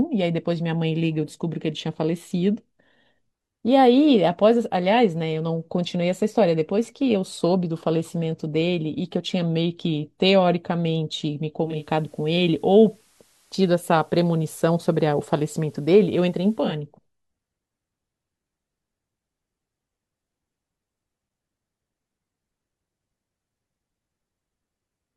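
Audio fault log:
11.59–16.84 s, digital radio blending to analogue: the receiver lost the digital stream and cross-faded over about 325 ms to the station's FM broadcast, then faded back at 16.84 s. The speech level holds steady across both blends, but while the FM path is carrying the audio a layer of broadband hiss sits under the speech, around 35 dB down. That is the noise floor of the analogue FM reception, absent from the digital feed.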